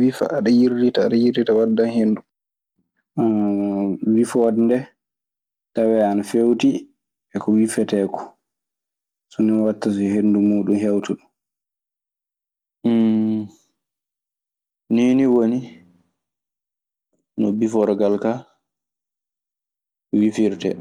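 A speech recording with a block size mismatch (truncated) running throughout. A steady buzz sits at about 91.9 Hz, the block rate. One stage writes longer blocks than the next reads, so each block's tail is dropped. The discarded share is tiny, and playback runs at 1.0x speed.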